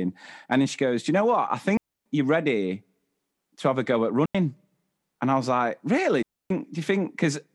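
Speech with three digital wireless dropouts, where the receiver mutes lost data: clean near-silent holes at 1.77 s (285 ms), 4.26 s (91 ms) and 6.23 s (277 ms), with no noise bursts.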